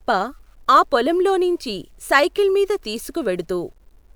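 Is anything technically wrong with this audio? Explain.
Yes. Throughout the speech there is grainy, signal-following distortion that makes quiet passages gritty and sputtery, with error roughly 45 dB below the signal. It fits low bit depth without dither, likely truncation to about 10 bits. On a waveform, low-level stretches show coarse steps. A spectrogram shows broadband grit that appears only alongside the sound.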